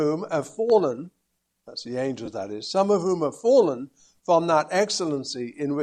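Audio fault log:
0.70–0.72 s, loud pop: a single sharp pulse peaking a few dB above the sound, likely a voltage step such as a switch or static discharge, which the circuitry rounds into a thump.
2.25–2.29 s, lost LE Audio frames: for about 22.5 ms, which fits three missing LC3 frames, the decoder repeats the last spectrum with scrambled phases, smearing the sound into brief noise.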